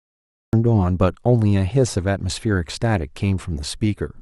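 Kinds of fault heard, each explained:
Cut-off start: capture of the speech began late, so the clip holds digital silence until 0.53 s and then enters abruptly partway through a sound, with no natural onset or fade-in, as though the opening was clipped off by a recording or stream that started too late.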